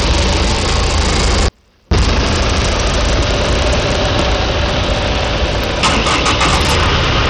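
A recording of everyday sounds, and it's in rough shape. There's hard clipping all the way through: it's driven about 20 dB past full scale, so a good chunk of the peaks get sliced flat and every loud moment turns into harsh fuzz. On top of that the top end thins out and flickers, with gritty noise and aliasing riding on everything. That's most likely Bluetooth SBC compression, with the starved treble pointing to a low bitrate. Then from 1.48 to 1.91 s, about 430 ms, the sound cuts out abruptly, leaving only a faint residue about 40 dB down before it snaps back. That's a classic audio dropout to a faint residue.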